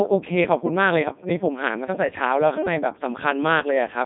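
Codec 2 vocoder damage runs through the entire speech clip, giving the voice a robotic, buzzy quality. Only pitch, voicing, energy and a rough spectral envelope survive, and the decoder rebuilds the voice from sine waves. Nothing remains above 3.8 kHz within a 150 Hz to 3.7 kHz band, and the codec ran in its 3.2 kbit/s mode.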